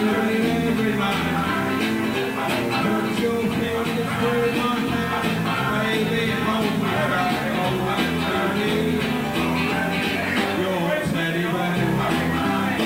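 From start to finish the audio carries a grainy, rasping distortion that moves with the sound itself, sitting only about 25 dB below the signal. Quiet passages turn gritty and the faintest parts break up or sputter rather than fading smoothly. The likely cause is low bit depth without dither: the signal seems reduced to roughly 5 bits by plain truncation, so the rounding error tracks the waveform instead of spreading into a steady noise floor.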